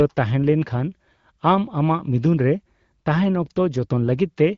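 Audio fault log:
No fault to log for this speech clip.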